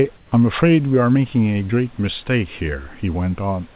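A speech recording whose background, from 0.17 to 0.32 s, turns into steady, featureless hiss about 4 dB quieter, likely comfort noise in place of the background, unlike a gate's silence; the telephone-band call path stops near 4 kHz.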